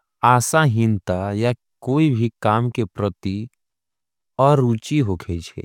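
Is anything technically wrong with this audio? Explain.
No, nothing technically wrong shows up anywhere in this speech recording.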